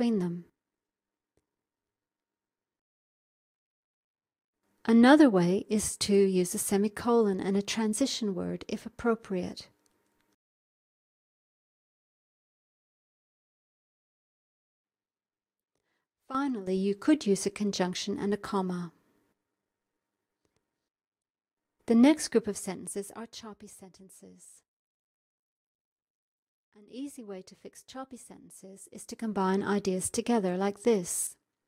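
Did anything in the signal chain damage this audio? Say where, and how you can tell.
Yes. A gain stage, at the driver or buffer level, applied two level changes in 1 dB steps with no smoothing between them. Each jump leaves a small discontinuity in the waveform, so zipper noise rides on the sound as a fast ticking, roughly thirty steps a second. It happens first from 22.2 to 23.48 s as the level drops by about 15 dB, and again from 28.76 to 29.52 s as it climbs back by about 15 dB.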